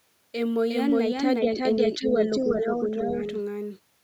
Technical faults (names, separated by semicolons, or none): doubled audio track; speech suppressed in double talk; other side's voice leaking through